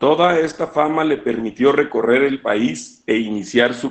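From start to finish the speech carries Opus voice compression, and pretty plainly. Nothing comes through above about 8.7 kHz, the wideband SILK limit, and the coarse excitation coding leaves voices muffled, a bit hoarse and faintly robotic, which fits a bitrate around 12 kbps.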